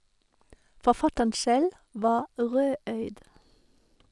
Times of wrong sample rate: 2.22-3.96

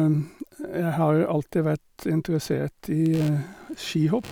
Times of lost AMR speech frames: none

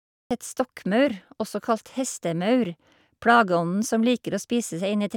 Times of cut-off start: 0.00-0.31

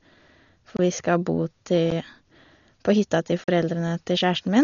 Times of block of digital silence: 0.77-0.79, 1.90, 3.44-3.48

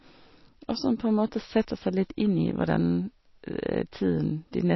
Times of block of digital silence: none

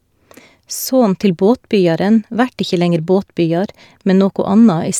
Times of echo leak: none

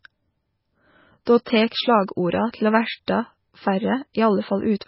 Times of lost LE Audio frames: none

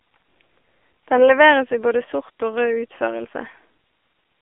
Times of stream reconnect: none

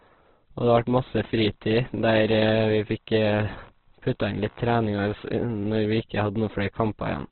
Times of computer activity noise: 1.38-4.73

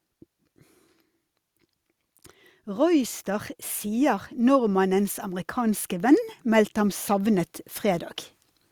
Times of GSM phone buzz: none

